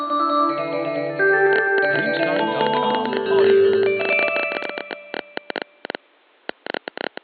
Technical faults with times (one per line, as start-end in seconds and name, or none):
1.53-7.18 train of clicks